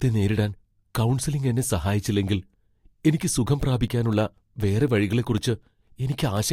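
Periodic USB or driver dropouts run through this speech clip from 3.63 to 6.37 s, just after "എനിക്ക് സുഖം": every 0.25 s, roughly a millisecond of signal drops to silence, about ten times in all, because a recurring background task stalls the audio path, leaving regular ticks.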